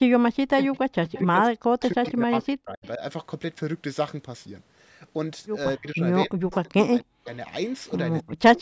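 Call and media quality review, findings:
Speech suppressed in double talk, 0.29–3.01 s, 5.78–7.27 s and 8.22 s to end. Talker level drops in pieces, at worst by about 40 dB, roughly two, one and a third of a second affected. Likely the echo canceller ducking both the local talker and the loudspeaker echo while far end talks.

Echo leak, 265 ms delayed copy of far-end audio at 0.75–1.2 s, 1.81–2.12 s, 2.84–2.88 s, 6.51–6.55 s and 7.24–7.28 s, about 15 to 35 dB under speech. Likely residual echo from a loudspeaker side, canceller not fully removing mic pickup. Band limited at 8 kHz.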